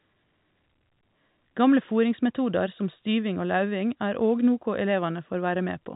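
No technical faults to report in this speech, which comes through G.711 telephone coding with the band capped at about 3.8 kHz, as that path should.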